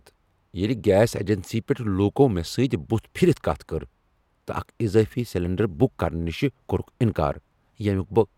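No dropouts, clicks, distortion or level jumps turn up anywhere in the speech; nothing to flag.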